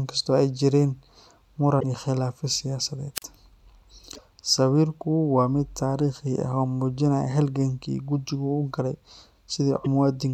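At 1.77 to 1.84 s the speech breaks into a short burst, the first of three bursts of damaged data in a compressed stream. Corrupted bytes leave the decoder misreading frames and hunting for the next valid header, so it outputs garbage for a few tens of milliseconds.

From 3.15 to 3.23 s comes a wireless microphone squelch dropout. The FM radio link fades, hiss rises briefly, and the receiver's squelch then mutes the output for about 40 ms before the speech returns. The waveform shows a thin band of noise falling to a near-flat line, then recovering. The spectrogram shows diffuse static followed by an almost empty vertical gap.

The same decoding fault returns at 4.14 to 4.19 s and again at 9.81 to 9.86 s.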